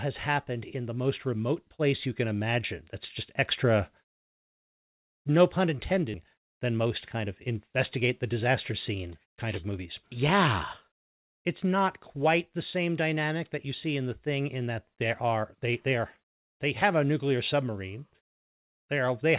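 At 6.14 s the playback does a skip ahead. Roughly a second of speech is thrown away, and the audio on either side is butted together with no silence or filler between them. That sets it apart from a dropout or concealed loss, where a gap, a fade or a smeared stretch would mark the hole. Here the sound simply lurches forward, and the delay through the receiver shrinks by about the same second.

From 6.24 s to 8.96 s a jitter buffer speed-up follows, with playback running at about 105% as the buffer trims its excess. Short pieces one or a few pitch periods long are cut repeatedly, removing something like 150 ms in total, so the talk sounds slightly rushed while its pitch stays put. That unchanged pitch is what separates it from a resampling or clock-rate error, which would raise pitch along with speed. Throughout, the G.711 mu-law call path holds everything below 4 kHz, giving the familiar narrowband telephone tone.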